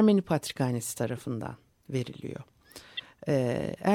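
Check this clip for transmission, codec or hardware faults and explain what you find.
Two codec faults turn up, both corrupt frame decoded. At 1.17 to 1.20 s and again at 2.97 to 3.00 s, a single compressed frame arrived with damaged bits and was decoded anyway. Its misread gains and codes put energy at the wrong frequencies, so each event is a brief chirpy blip laid over the speech. The first is faint, around -35 dBFS at its peak, and the second is clearly louder, near -20 dBFS.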